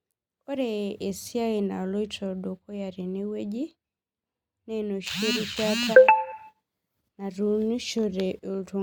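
Nothing technically wrong turns up anywhere in this speech recording, so there are no times or causes to point to.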